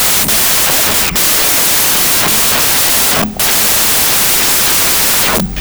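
From start to finish, 16-bit integer audio is being read as packed 24-bit integers, a wrong sample width fault. Each decoded sample takes three bytes where two were written, so most values splice the end of one true sample onto the start of the next. The result is loud, harsh noise with the speech faintly buried inside it, running 1.5 times too fast and correspondingly raised in pitch.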